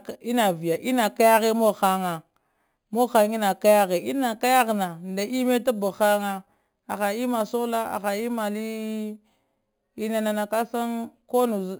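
From the very start and right through the speech, there's imaging from sample-and-hold upsampling. The audio sounds like it was raised from a low rate, which fits something around 11 kHz, by just repeating each sample with no smoothing. That leaves a mirrored copy of the spectrum sitting between about 5.5 kHz and 11 kHz, roughly 18 dB under the signal. You hear it as a metallic fizz riding on the voice, rising and falling with it.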